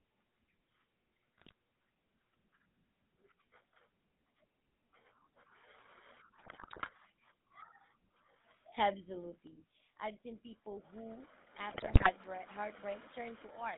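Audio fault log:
throughout: GSM full-rate codec. The speech is confined to a band of roughly 150 Hz to 3.7 kHz and has a plainly audible buzzy, gravelly roughness. The codec rebuilds each stretch from a vocal-tract filter driven by a thinned-out pulse train, and the result fits the 13 kbps GSM full-rate coder. A plain telephone low-pass would sound muffled but smooth. The grit here comes from the coarse excitation itself.
1.38–1.52, 6.38–6.89 and 11.70–12.12: GSM bit errors. These are three bursts of squawks, pops and gargling. The longest, at 6.38–6.89, runs about half a second, and the last is the most severe. Flipped bits have corrupted the decoder's filter, pitch and gain values, so the spectrum warps and the level lurches from frame to frame. A dropout goes silent or repeats cleanly. These bursts stay loud and turn distorted and tonal.
9.47 to the end: sudden gain jump. At 9.47 the speech and the background noise both drop by about 7 dB in a single step, with no fade, and stay at the lower level to the end of the clip. 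A digital gain setting or bit shift applied without a ramp is the likely cause. An automatic gain control would ease the level down and often pump. A step this abrupt, with the noise floor falling together with the speech, points to a one-sample change.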